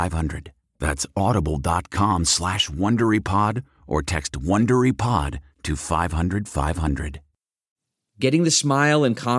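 Nothing in the speech stood out as a technical fault on listening.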